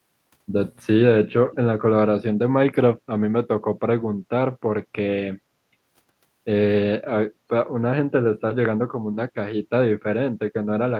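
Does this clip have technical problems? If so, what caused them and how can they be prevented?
Yes. From 1.52 to 1.56 s an echo leak returns a faint, delayed copy of the speech 318 ms late, likely from a far-end loudspeaker that its echo canceller missed. The distinct, fixed delay separates it from room reverberation, which smears sound continuously. Headphones on the far side or better-tuned echo cancellation would prevent it.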